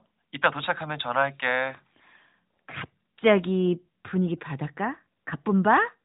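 Nothing stood out on listening to this speech, which keeps the narrow, telephone-like band of the AMR narrowband mobile codec it passed through.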